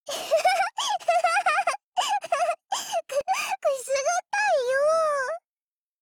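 At 3.21 s, a block of digital silence: an output buffer likely went unfilled and was zeroed, leaving a 32-sample, 0.73 ms hole heard as a tick or dip.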